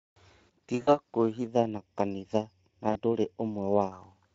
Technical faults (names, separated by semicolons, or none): VoIP packet loss concealed by the speech codec; channel delay (comb filtering)